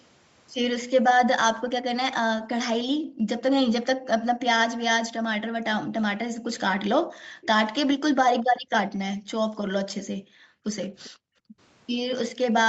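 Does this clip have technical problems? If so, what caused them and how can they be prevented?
Yes. The room background drops out by up to about 40 dB at 2.97–3.28, 3.86–4.07, 7.04–7.41 and across 8.51–11.59 s. This is background gated by the echo canceller clamping the microphone while the loudspeaker played. Gentler suppression settings or a headset would prevent it.

Faint scraps of speech repeat roughly 0.4 s late, about 25 to 30 dB down, at 7.41–7.47, 8.94–9.16 and 11.04–11.10 s. This is likely echo leak from an echo canceller letting loudspeaker pickup through. Lower speaker volume, better device placement or headphones would prevent it.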